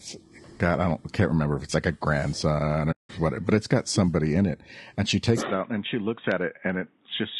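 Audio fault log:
throughout: low-delay AAC compression. The speech was likely carried by a low-delay AAC codec such as AAC-ELD at a bitrate around 32 kbps; its short frames resolve pitch harmonics poorly, so the voice sounds plainly rough and grainy, with noise filling between harmonics.
2.91 to 3.10 s: AAC frame loss with muting. About 180 ms of coded audio, which fits roughly nine lost frames, never reached the decoder, which zeroed that spectrum. Overlapping windows fade the speech out and back in, leaving a soft-edged gap.
5.41 to 7.39 s: input switched to a poorer device. The recording likely moved to a lower-grade microphone or headset path. With no gap at the switch, the speech turns dull, with nothing above 3.8 kHz, drops by around 5 dB, and gains new background noise roughly 45 dB below it.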